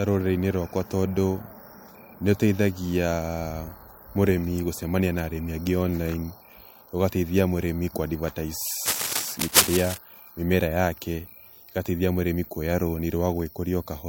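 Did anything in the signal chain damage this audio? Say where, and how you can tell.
Yes: from 8.85 to 9.98 s, before "mĩmera yake ũgateithia mũrĩmi", rustling scratches roughly match the speech's loudness, likely cable scratch noise from a worn analogue connector's jittering contact.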